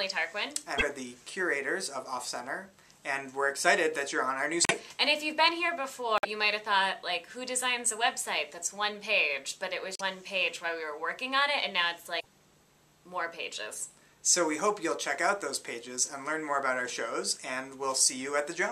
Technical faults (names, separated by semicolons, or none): broken MP3 bit reservoir